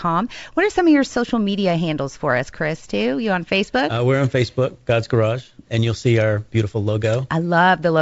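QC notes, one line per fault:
No faults heard.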